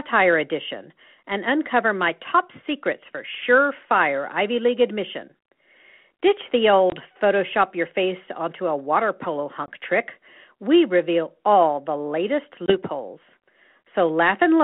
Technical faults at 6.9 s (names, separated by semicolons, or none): packet loss on an ADPCM call